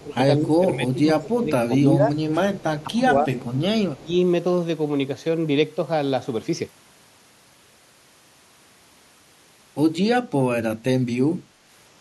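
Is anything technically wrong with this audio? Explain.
Yes. Speech suppressed in double talk appears at 0.03–2.15 s, 2.86–3.31 s and 3.98–4.12 s. The voice dips by as much as about 15 to 20 dB, likely because an echo canceller mistook overlapping far-end talk for echo and attenuated both. The waveform envelope sags and the spectrogram thins.

Echo leak occurs at 2.56–2.84 s, 3.38–3.60 s and 3.95–4.00 s. A faint copy of the voice trails by 225 ms, about 25 to 30 dB down, likely residual loudspeaker pickup the canceller missed. On a spectrogram it shows as weak, time-shifted duplicate harmonics.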